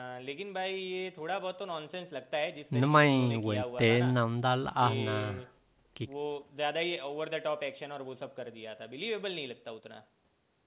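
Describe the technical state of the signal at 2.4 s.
At 2.4 s the speech is intact, with nothing wrong at that moment beyond the ordinary narrowband sound of the call path, whose G.711 mu-law coding leaves nothing above 4 kHz.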